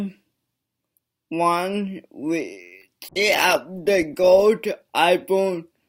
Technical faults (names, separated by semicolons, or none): short stall from a late packet; short concealed packet loss; call bitrate drop